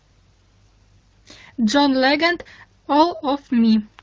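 Nothing goes wrong here: the speech comes through AMR wideband (HD Voice) coding at what sounds like a fairly high rate of around 16 kbit/s, leaving only a light touch of the codec's character, and there's no fault to point to anywhere in it.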